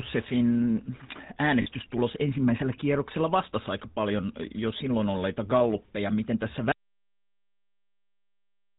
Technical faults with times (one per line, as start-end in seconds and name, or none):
0.00-8.79 GSM full-rate codec
1.62-1.67 lost GSM frames
6.72-8.79 audio dropout to silence